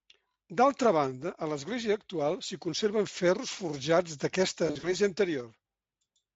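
VoIP packet loss concealed by the speech codec occurs from 4.67 to 4.95 s, just after "s'hi conserven ferros forjats". About 100 ms of audio goes missing, scattered over a 160 ms span in gaps no longer than 40 ms, which fits roughly five lost 20 ms frames. For each gap the Speex decoder repeats its last pitch and filter at falling gain. The speech smears into short buzzy or noisy, fading patches, and it stays weak or rough for a moment after the stream resumes.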